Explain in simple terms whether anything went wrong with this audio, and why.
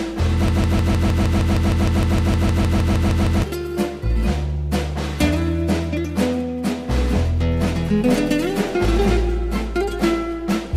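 Something did go wrong, early in the clip. From 0.48 s to 3.43 s the audio is caught in a broken-record loop: a short piece about 0.15 s long plays 19 times in a row with no change, giving a stuttering effect. The likely cause is that the player or stream stalled and kept re-sending the last chunk it had. Whatever sound belonged in those three seconds is missing.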